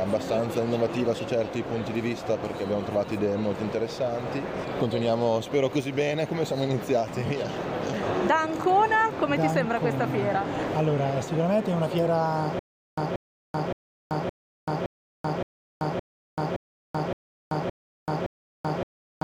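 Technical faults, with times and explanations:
12.59 s to the end: stutter with silent gaps. The playback or stream has most likely stalled, and at each retry it replays the last fragment it held before running dry again. A burst of about 182 ms repeats 11 times at a steady period of about 567 ms, with roughly 385 ms of dead digital silence between repeats. The audio that belonged in that stretch never plays, so the clip ends on this mechanical loop.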